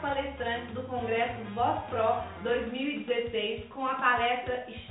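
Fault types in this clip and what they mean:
Nothing stood out on listening; the sound carries the narrowed, telephone-like bandwidth of a G.711 call path, with nothing above 4 kHz.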